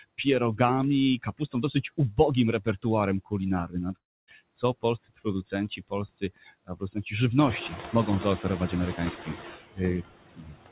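Noise suppressor artifacts run through the whole clip. The suppressor cuts steady background by about 20 dB, frame by frame. The leftover noise dips between phrases and swells under the speech.

From 1.19 to 1.75 s, speech is cut by the noise suppressor. About a tenth of a second of quiet speech is treated as noise and pulled down by up to about 18 dB. Those parts sound swallowed. The same happens from 3.68 to 7.12 s, this time over about half a second in total, with drops of up to about 20 dB.

Inside that stretch, from 3.96 to 4.29 s, the sound breaks off for about a third of a second. The last sound smears into a fading buzz, then near silence. The speech returns with a piece missing. A long network dropout is the likely cause.

At 7.37 s the room noise jumps by about 18 dB, and the noise suppressor is catching up. For 0.29 s the noise comes through with only about 6 dB of reduction. 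It then sinks as the suppressor's estimate adapts.

From 8.43 s to the end, soft speech is again cut by the suppressor, by up to about 22 dB. Quiet sounds and endings come out faint. Throughout, the G.711 mu-law call path leaves nothing above 4 kHz.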